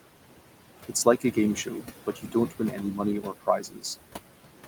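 All the way through there are noise suppressor artifacts: the room noise, about 12 dB under the speech, gets pulled down about 17 dB in the gaps and rises again under the words. There's also speech cut by the noise suppressor at 0.88–1.37, 1.55–1.87, 2.06–3.0 and 3.21–3.84 s, where it mistakes quiet speech for noise and ducks it about 12–13 dB, and about 18 dB in the last one, so bits sound swallowed.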